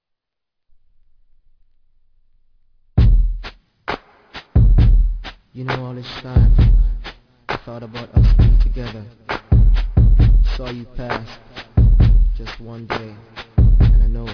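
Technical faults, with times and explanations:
Throughout, aliasing: the audio sounds resampled down without an anti-alias filter, which points to a drop from 48 kHz to 11 kHz. Content above the 5.5 kHz fold reflects back as unrelated gritty, metallic tones, roughly 25 dB below the signal, and the spectrum runs hard to that edge.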